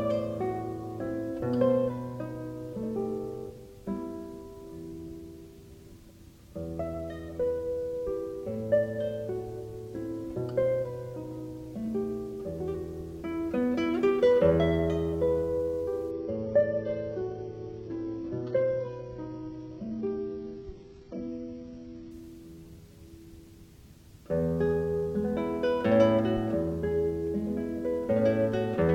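From 16.11 to 22.11 s the sound switches abruptly to an adaptive stream at a lower bitrate. Nothing survives above 7.9 kHz, which points to a very low-rate HE-AAC rendition. Unlike packet loss, there is no gap, and quality returns just as suddenly.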